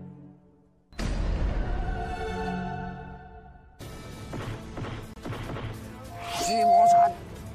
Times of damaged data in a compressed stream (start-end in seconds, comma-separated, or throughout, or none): 5.13-5.18